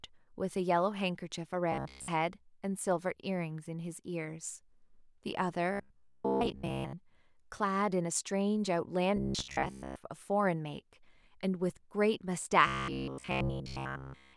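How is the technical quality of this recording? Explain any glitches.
The speech has four glitches of one kind: robotic sound from repeated short buffers, at 1.72–2.09 s, 5.72–6.95 s, 9.17–9.96 s and 12.67 s to the end. Each turns the voice into a rigid metallic buzz pitched at 66.9 Hz that only loosely tracks the words. In the final stretch the buzz takes over completely. The likely cause is audio arriving too seldom, so a slice of about 15 ms is replayed in place of skipped material, and that repetition rate fixes the pitch.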